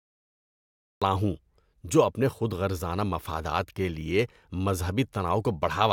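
Right at the top there's a cut-off start: the first 1.02 seconds are silence, and then the speech just appears at 1.02 s already mid-sound, with no attack and no fade-in. What went wrong is that the capture or stream kicked in late, after the talker had already started, so whatever came before that point simply never got recorded. You hear it as a hard jump from nothing straight into the middle of a sound.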